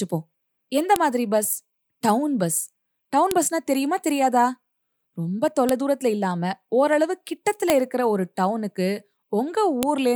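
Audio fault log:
0.96 s, 3.31 s, 5.69 s, 7.7 s and 9.83 s: file header played as audio. Each of these five points marks a join where a new WAV piece begins and its header bytes were passed to the output as if they were samples. Those few dozen bytes form a burst of arbitrary, large values with no relation to the speech around them, so each join produces a sharp, loud click or snap lasting only an instant.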